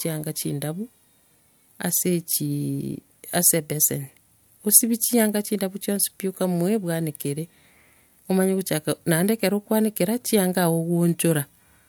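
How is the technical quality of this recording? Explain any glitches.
The speech recording has no technical glitches, and the signal stays continuous and intact throughout.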